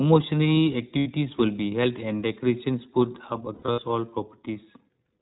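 iLBC codec throughout: the speech is band-limited to below 4 kHz and has a plainly audible rough, synthetic edge. Each frame's excitation is coded independently, and the sound fits the 15.2 kbps mode with 20 ms frames.

Lost iLBC frames at 0.98 to 1.07 s: about 80 ms of audio, which fits four 20 ms frames, went missing. The decoder filled the gap by repeating the last pitch cycle blended with noise, so the speech briefly becomes a held, buzzy vowel before snapping back cleanly.

Lost iLBC frames again at 3.54 to 3.80 s: losses totalling 160 ms are scattered across about 240 ms, with the longest unbroken gap around 70 ms. The concealment stutters between breathy, sustained pitch-cycle repeats and intact speech, and each time the next real frame restores the speech.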